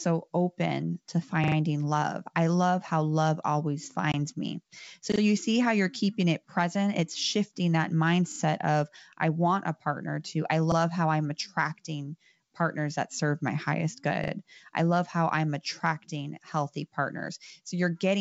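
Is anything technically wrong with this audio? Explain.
Yes. There are two kinds of fault: repeated buffers and one packet-loss gap.

A repeated buffer occurs five times: 1.44 to 1.56 s, 5.12 to 5.20 s, 8.32 to 8.40 s, 10.72 to 10.76 s, and 14.24 to 14.32 s. New audio arrived late, so playback looped the last chunk instead. Each repeat is 40 ms long, which fits a 40 ms buffer. The chunk plays one to three extra times, with a hard join at every loop. It sounds like a quick stutter in the speech.

Packet loss on an ADPCM call appears at 4.12 to 4.15 s. About 20 ms of audio is missing, roughly one packet's worth, and silence fills the gap. The hole has abrupt edges. The adaptive decoder then has to resynchronise its predictor and step size with the sender. So the speech comes back slightly distorted, and it settles within a few tens of milliseconds.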